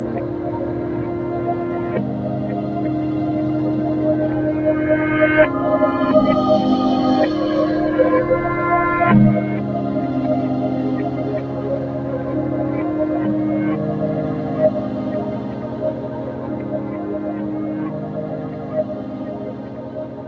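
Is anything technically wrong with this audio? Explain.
Yes. A noise suppressor applied to music or sounds runs throughout. Built for speech, it treats steady tones and tails as noise, pulling them down about 5 dB so the sound pumps and thins.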